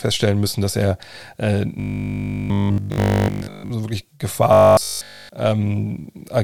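From 1.8 to 3.7 s, after "müssen dass er äh", and again from 4.53 to 5.31 s, after "so wirklich", the speech becomes a rigid metallic 50 Hz buzz. This is robotic sound from repeated short buffers, likely one 20 ms block replayed almost continuously while fresh audio arrives too seldom.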